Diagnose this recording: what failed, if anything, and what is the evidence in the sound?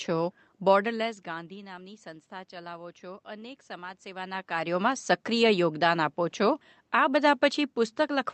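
Nothing in the signal chain failed: the speech carries room noise from the recording space and level shifts near 0.5 s and 4.0 s where the talker moves relative to the microphone, and it passed through a call path whose coding texture and top end limited at 8 kHz fit Opus at around 32 kbps.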